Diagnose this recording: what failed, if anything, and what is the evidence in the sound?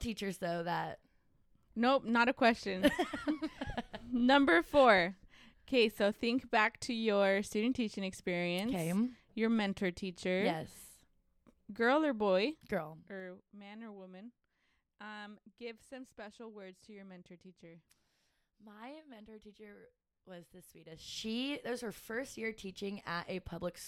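Zipper noise from unsmoothed gain at the buffer stage. The level moves in 3 dB steps, each one ticking: about 15 dB down at 12.47–13.48 s, then back up at 20.88–21.27 s.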